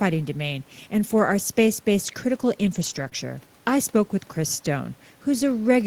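From 2.69 to 3.07 s the speech turns rougher and noisier without any gap: a lost packet rebuilt from error correction, with the decoder playing low-bitrate copies carried in following packets. At 3.09 to 3.13 s a brief smear or wobble follows, a short concealed packet loss where about 20 ms never arrived and was filled by extending the preceding sound.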